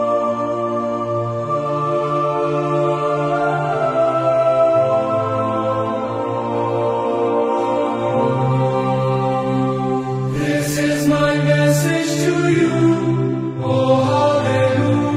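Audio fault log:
5.57–11.41 s, call bitrate drop: At 5.57 s the sound loses quality and stays degraded for about 5.8 s. This fits the call's bandwidth estimate falling and the encoder being cut from around 96 kbps to around 28 kbps. With far fewer bits, each frame is coded more coarsely, so the audio turns rough, watery or muffled. It clears at 11.41 s, when the bitrate recovers.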